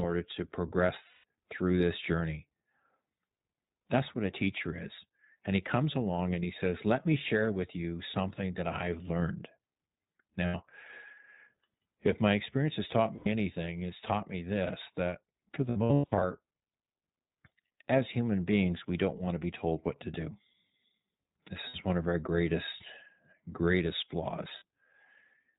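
Throughout, the speech is band-limited below 4 kHz and sounds rough and synthetic. This is the iLBC codec, which fits its 15.2 kbps, 20 ms-frame mode. It codes each frame independently.

Lost iLBC frames sound like brief held, buzzy vowels as the decoder repeats the last pitch cycle with noise. The speech then recovers at once. They occur at 1.08–1.24 s (160 ms, just before "through this journey"), 10.46–10.56 s, 13.16–13.28 s, 15.70–16.24 s (after "me this that for", scattered gaps with the longest about 100 ms), 21.68–21.76 s (before "one of our greatest") and 24.58–24.62 s.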